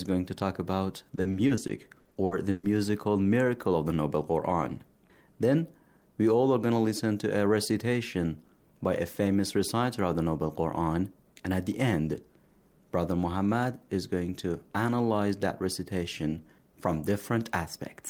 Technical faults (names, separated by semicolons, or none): repeated packet loss (robotic sound)